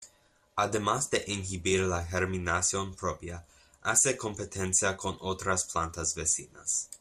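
Throughout, the speech sounds dull and gurgling, likely MP2 compression at a rate fitting 80 kbps; a spectrogram shows upper bands flickering out.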